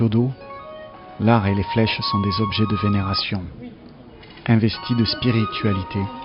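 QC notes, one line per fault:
No technical faults are present anywhere in the signal.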